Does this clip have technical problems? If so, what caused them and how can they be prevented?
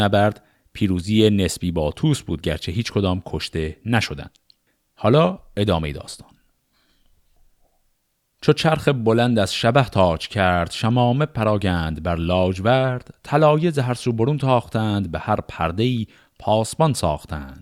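No, this speech recording shows no technical fault, so there is no cause to trace and nothing to prevent.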